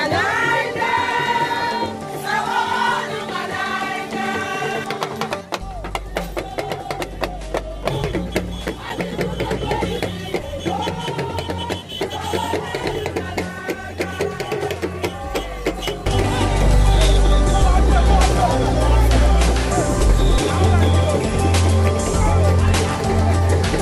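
From 7.83 to 9.54 s, CD scratch ticks appear. Nine short clicks fall about five per second, the longest a few milliseconds. A scratch defeats error correction once per disc turn. A second run, seven ticks, follows from 12.77 to 14.05 s.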